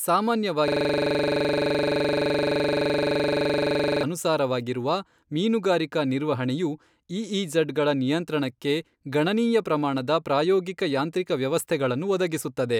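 From 0.68 s to 4.03 s the sound freezes into a rapid, rattling stutter, one 42.67 ms fragment repeating about 80 times at 23.4 Hz. This is a system hang loop: the system stalled while the audio hardware kept replaying the same ring buffer, which fits a 2048-sample buffer.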